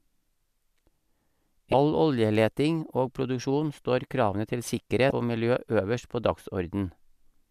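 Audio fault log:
1.71–1.74 s and 5.09–5.12 s, damaged data in a compressed stream: each is a 30 ms glitch cutting into the speech. Corrupted bytes there leave the decoder misreading frames and losing sync until it locks onto a valid header, so it briefly outputs garbage instead of the signal. On a spectrogram each shows as a narrow vertical block of smeared or oddly tonal energy breaking the speech harmonics; the waveform shows abrupt discontinuities at both edges.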